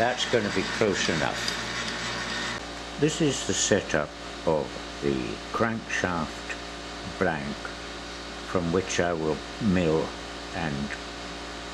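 At 1.63, 3.60, 5.58, 7.55 and 9.53 s the sound skips briefly, losing roughly 30 ms each time, and the two sides are butted together. The regular spacing of about 2 s points to audio missing between chunks, likely dropped at each block changeover.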